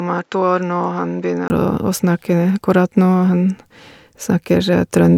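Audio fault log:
0.0–1.5 s, input switched to a poorer device: the opening speech sounds duller and noticeably quieter, roughly 10 dB down, with nothing above 7.6 kHz and a faint noise floor well below the speech, then brightens and fills out after a 20 ms gap at 1.5 s. This is likely a change of capture device, the first one passing a narrower band. On a spectrogram the top band sits empty until 1.5 s. The waveform shows smaller amplitude, a brief flat gap, then larger swings.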